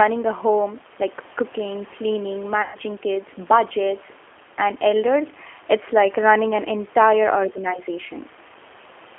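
From start to end, the speech carries the sound of the G.729 codec. The band is narrow, roughly 300 Hz to 3.4 kHz, so nothing bright or airy survives. The codec rebuilds each 10 ms frame from a vocal tract filter, a pitch predictor and a few pulses, which fits an 8 kbit/s link. The damage is plainly audible. Voices sound rough and synthetic.

From 2.62 s to 2.78 s comes VoIP packet loss concealed by the speech codec. About 120 ms of audio went missing, which fits six lost 20 ms packets. The decoder filled the gap by repeating its last pitch and filter settings with falling gain. The result is stretched sound that fades. Because each frame builds on the one before, the speech stays weak and distorted for a moment after the gap.

From 7.59 s to 7.73 s, a faint second voice briefly comes through. It sits well below the main speech, roughly 25 dB down. This is likely the other side's voice leaking through. 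The talker's loudspeaker would reach the microphone, and the echo canceller would fail to remove that scrap.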